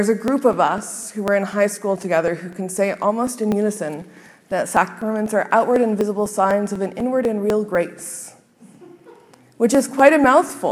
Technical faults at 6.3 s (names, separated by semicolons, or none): periodic USB or driver dropouts